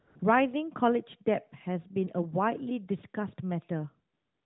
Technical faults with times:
0.00-0.22 AMR comfort noise
4.14-4.45 AMR comfort noise

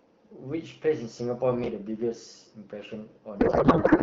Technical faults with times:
1.64-1.68 chunks out of order
3.39-4.02 codec payload misread

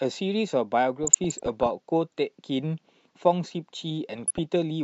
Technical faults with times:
1.03-1.66 DAB burbling
4.16-4.39 DAB burbling

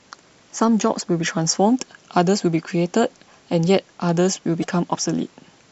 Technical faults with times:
0.98-1.01 broken MP3 bit reservoir
4.61-4.66 broken MP3 bit reservoir

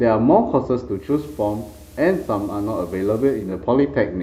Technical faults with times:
0.85-3.66 digital radio blending to analogue

